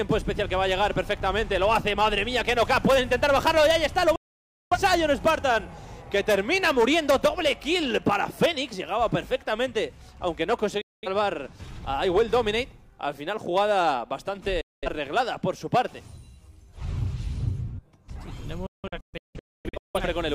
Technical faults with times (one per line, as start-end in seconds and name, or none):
4.16-4.77 digital broadcast dropout
10.81-11.07 digital broadcast dropout
14.61-14.87 digital broadcast dropout
18.66-20.00 digital broadcast dropout